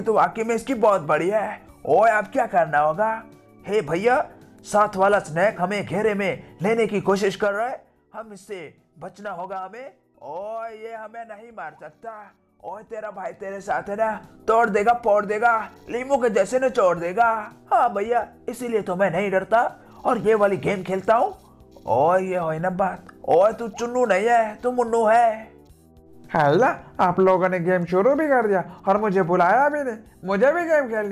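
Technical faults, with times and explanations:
Nothing stood out on listening that would count as a technical fault.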